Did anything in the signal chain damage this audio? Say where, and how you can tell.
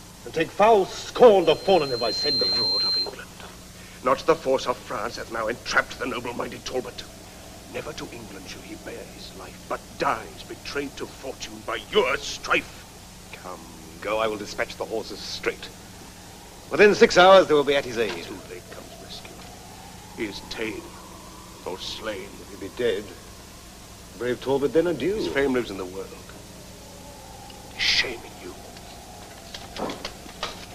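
Yes. From 1.42 s to 3.17 s a pure, piercing tone at 4.2 kHz swells over roughly a second until it stands a few decibels above the rest of the sound, then stops. That is loudspeaker feedback squeal, damage in the analogue and acoustic stage. The microphone was picking up the loudspeaker it was driving, and at 4.2 kHz the loop gain rose past one, so that frequency kept reinforcing itself until the amplifier limited it or the loop was broken.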